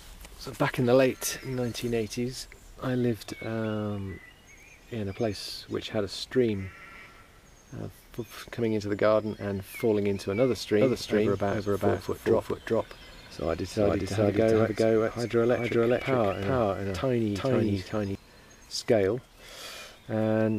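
From 10.81 to 18.15 s, a doubled audio track: a copy at roughly equal level trails about 0.4 s behind, likely from a slower second path or misaligned edit; unlike echo, it never decays and starts and stops abruptly.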